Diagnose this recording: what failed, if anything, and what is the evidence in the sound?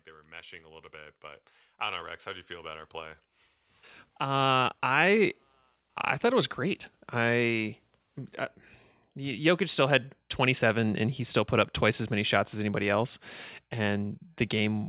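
Automatic gain rising, in the call processing stage. From 0.05 s to 5.42 s the speech and the background noise swell together, by about 16 dB overall, settling just before "I thought it was". Because the noise floor climbs in step with the voice, this is gain applied to the whole signal, not a talker moving closer. The AGC judged the input too quiet and ramped its gain up slowly. The narrowband sound, with nothing above 4 kHz, fits a G.711-type telephone codec in the call path.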